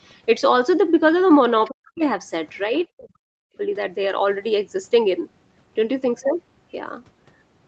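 Other side's voice leaking through, at 1.65 to 1.72 s: a brief scrap of a second voice sits about 20 dB under the talker. It is likely loudspeaker echo that the canceller failed to remove from the microphone signal before sending it on.

Speech suppressed in double talk, at 1.71 to 2.02 s and again at 2.97 to 3.59 s: the talker's speech drops sharply, by as much as around 40 dB, for roughly a third of a second and then half a second. This is likely the echo canceller mistaking overlapping talk for echo and ducking the talker along with it.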